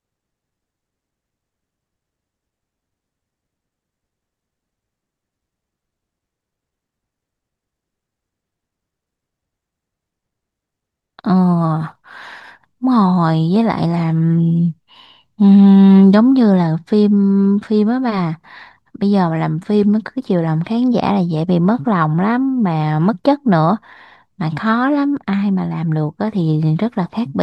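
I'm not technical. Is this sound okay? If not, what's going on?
Yes, nothing stood out as a problem when listening to this speech recording.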